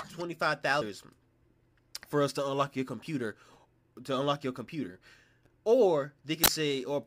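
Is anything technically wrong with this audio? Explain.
Yes. From 6.44 to 6.48 s a short glitch cuts across the speech. This is damaged data in a compressed stream: the decoder meets corrupted bytes, fails to decode those frames properly, loses sync, and hunts for the next valid frame header before clean audio resumes.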